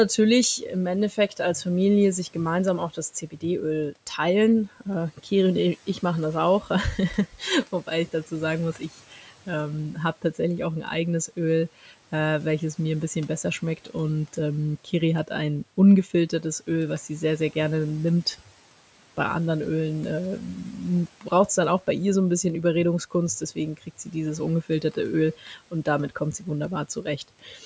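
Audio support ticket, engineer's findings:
Speech cut by the noise suppressor, four spans. 0.17–9.31 s, ending before "ähm habe tatsächlich auch": soft endings and consonants pulled down, about 12 dB at worst, roughly 0.7 s affected in total. 11.28–11.92 s, between "tatsächlich auch ein eigenes" and "äh welches mir ein": about 9 dB, around 0.1 s. 13.77–18.48 s: about 10 dB, around 0.2 s. 23.11–27.64 s, after "ihr so ein bisschen": about 12 dB, around half a second. Component: the suppressor's gain stage, misreading quiet speech as noise and attenuating it with the background. Differs from packet loss because there are no hard gaps, clicks or repeated fragments, only swallowed, faded syllables. Differs from AGC pumping because only the low-level parts duck while loud syllables keep full level. Room noise sits about 26 dB below speech and the band stops at 8 kHz, from the call microphone's filtering.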